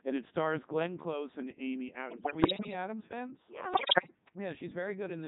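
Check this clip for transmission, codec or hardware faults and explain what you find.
Three faults are present: vocoder coding throughout, a level drop early on, and two bursts of radio bit errors.

Codec 2 vocoder, the whole clip: the speech has been reduced to pitch, voicing, energy and a spectral envelope at 3.2 kbit/s, then rebuilt from sine waves, so it sounds heavily robotic and buzzy. A spectrogram shows neat, over-regular harmonic stacks with smeared noisy detail.

Sudden gain jump at 0.86 s: the speech and the background step down together by about 6 dB and stay lower to the end, likely a gain setting applied with no ramp. The waveform envelope shows a one-sample step with no fade.

Bit errors on digital voice radio, 2.10 to 2.73 s and 3.74 to 4.15 s: flipped bits corrupt whole vocoder frames. Around 7 percent of bits are wrong in the first burst and about 10 percent in the second. 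Pitch, level and timbre lurch into bleeps and warbling gibberish. On a spectrogram, harmonics jump erratically frame to frame.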